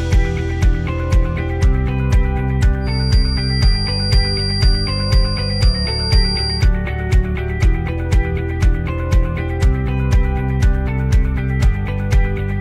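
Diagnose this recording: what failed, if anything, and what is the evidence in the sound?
A feedback whistle sits under the audio from 2.79 s to 6.70 s: a thin, steady tone at 4.8 kHz, roughly 10 dB below the signal and swelling and fading slowly in level. The likely cause is the acoustic loop from loudspeaker to microphone at the edge of oscillation.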